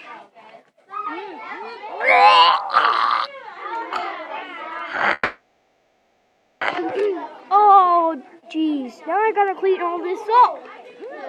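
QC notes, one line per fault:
5.13 to 6.63 s, call audio freeze: The sound stops moving forward for about 1.5 s. The last moment is stretched into a fading buzz or hiss instead of dropping to silence. When the audio returns, it picks up exactly where it left off. Nothing seems to be lost. Everything afterwards runs about 1.5 s late. This is likely a jitter buffer that ran dry while packets were held up, with the receiver filling the wait until they arrived.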